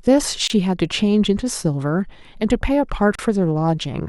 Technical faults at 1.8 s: none

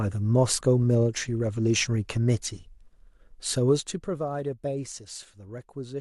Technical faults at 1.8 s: none

